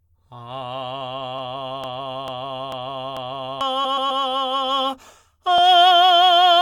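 A music clip with two playback faults. From 1.84 to 3.61 s, a broken-record loop: the player or stream likely stalled and kept resending the last fragment it held, so a 443 ms slice of the music repeats exactly four times, back to back, and the music that belonged there is lost. Shortly after, from 3.84 to 4.22 s, come repeated frames: a short run of compressed frames was sent again, so a 128 ms block plays three extra times. This is heard as a stutter, and it stretches the audio by 384 ms.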